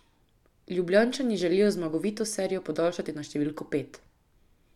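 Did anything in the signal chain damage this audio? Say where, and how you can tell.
No, no damage is audible.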